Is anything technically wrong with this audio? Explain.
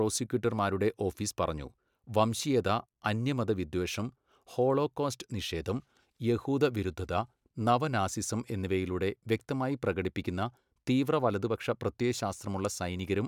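No, nothing technically wrong turns up anywhere in this speech recording.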